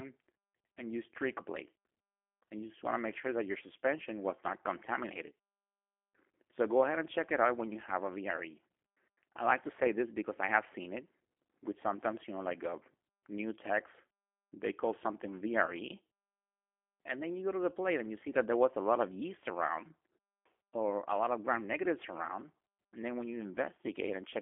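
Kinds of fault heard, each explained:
G.729 codec: The speech is rebuilt from a filter model and sparse pulses, which fits about 8 kbit/s. It sounds plainly rough and synthetic, with nothing above 3.5 kHz.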